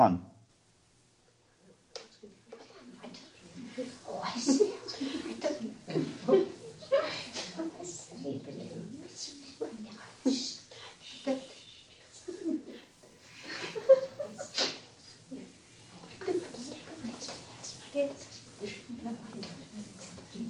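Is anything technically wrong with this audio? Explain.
Yes. From 12.71 to 14.71 s a faint, steady whine at 1 kHz sits roughly 40 dB under the sound. This is USB whine: current drawn in the bus's 1 ms frames leaks into the audio through power or ground, producing a fixed-pitch tone at that frame rate.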